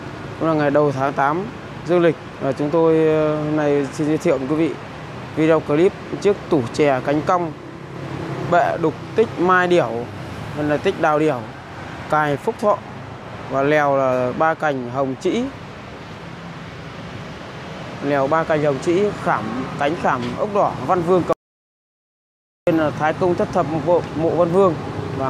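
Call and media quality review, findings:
Audio dropout to silence, 21.33–22.67 s: sound cuts mid-flow, about 1.3 s of dead silence, no room tone, unlike a level dip. Likely input link or device loss; recorder kept writing silence.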